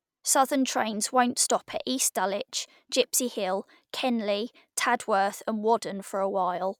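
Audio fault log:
No faults can be heard anywhere in this speech recording. There is nothing to log against any point in it.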